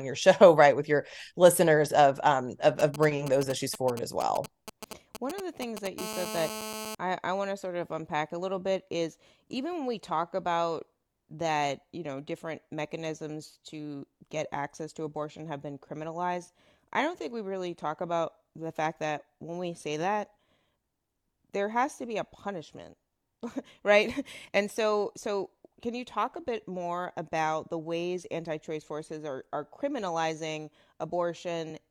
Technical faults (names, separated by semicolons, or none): GSM signalling bursts; GSM phone buzz